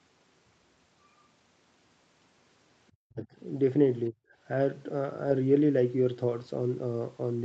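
From 2.91 to 3.27 s the speech sinks by roughly 40 dB, and from 4.11 to 4.16 s it briefly dips by about 25 dB. This is likely speech suppressed in double talk, an echo canceller ducking the talker while the far side also spoke.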